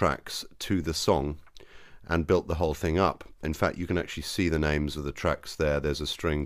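No technical faults can be heard anywhere in this clip. Nothing in the audio calls for a timestamp or a closer look.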